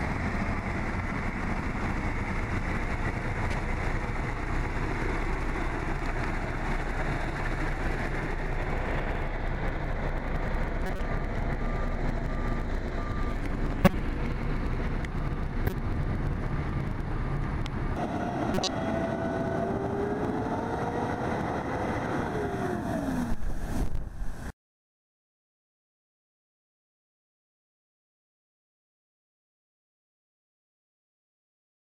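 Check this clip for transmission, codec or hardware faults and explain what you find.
The clip contains one kind of fault, a corrupt frame decoded, occurring five times: 3.51–3.54 s, 10.86–11.00 s, 13.85–13.94 s, 15.67–15.73 s and 18.53–18.73 s. Each time, damaged bits in compressed frames were decoded as if valid, so misread gains and codes put energy at the wrong frequencies for a few frames. The result is a brief artefact, such as a chirp, squeak, blip or noise burst. Its level peaks at about −15 dBFS for most events, about −10 dBFS at 15.67 s and about −5 dBFS at 13.85 s.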